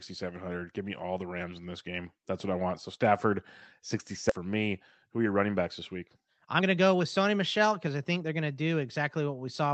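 A skip ahead occurs at 4.29 to 4.31 s: roughly 0.7 s of speech was dropped, most likely discarded when an overfull jitter buffer already held later audio. Playback jumps straight to that later speech with no gap or fill, leaving a clipped, abrupt join.

A jitter buffer speed-up runs from 6.19 to 8.33 s, just after "running backs this week". The receiver trimmed tiny pitch-period slices repeatedly to drain excess buffered delay, removing about 0.3 s in total. Speech plays at 115% speed with unchanged pitch and sounds rushed, while the call path's Opus coding keeps its usual band limit near 8 kHz.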